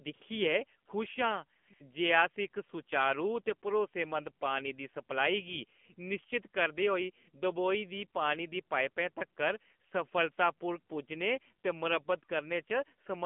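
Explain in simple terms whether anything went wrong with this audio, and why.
Yes, two things went wrong. The whole recording passed through the AMR narrowband mobile codec, the older phone-network speech coder, running at a low setting. It keeps only the band from about 200 Hz to 3.4 kHz and rebuilds the voice from a simple model of the throat and mouth, refreshed every 20 ms. So the speech sounds thin and muffled, like an old phone call, with a plainly buzzy, artificial edge.

The second problem is AMR comfort noise. At several moments the phone decided nobody was talking, stopped sending real speech, and the receiver filled the gap with smooth, made-up hiss. This happens at 0.14 to 0.22 s, 0.86 to 0.88 s, 1.58 to 1.68 s, 1.74 to 1.80 s, 9.90 to 9.92 s right after "दी पाइपा तगर", and 10.32 to 10.38 s. Each gap lasts between 20 and 100 ms, so the real background briefly drops out and is replaced by steady hiss.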